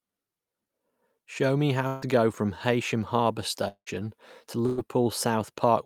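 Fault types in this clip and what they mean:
Burst of packet loss: after "me how" at 1.87 to 2.07 s and again at 4.66 to 4.86 s, a held, fading buzz or hiss covers about 120 ms of missing audio, visible as frozen, dimming sound before an abrupt jump.
Long network dropout: at 3.68 to 3.89 s, a decaying buzz or hiss gives way to about 80 ms of flat silence, likely a network outage that cuts about 180 ms of audio.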